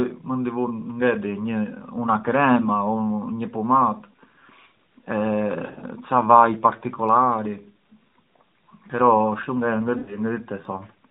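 From 5.66 to 5.84 s, just before "ca vaj particolari", the speech warbles and dips in short broken patches. About 100 ms is missing, scattered over 160 ms, with no gap longer than 40 ms. A similar warble and dropout of about 100 ms follows at 9.98 to 10.19 s. These are lost AMR speech frames in the narrowband coding, which is capped at 4 kHz. Radio errors corrupted the frames, and the decoder filled each gap by repeating the last good pitch and vocal-tract settings at falling gain.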